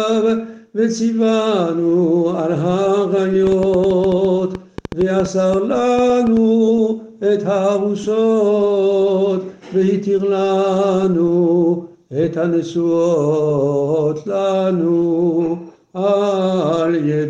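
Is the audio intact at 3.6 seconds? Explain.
No. From 3.47 to 6.38 s a train of clicks runs through the audio, likely from interference picked up off nearby equipment or a faulty connection or power supply, which injects short pulses of much the same shape into the signal. They arrive at about 6.6 per second on an uneven pace, around twenty in all, and peak at about 5 dB above the surrounding sound, so 3.6 s falls inside a stretch of irregular ticking and popping.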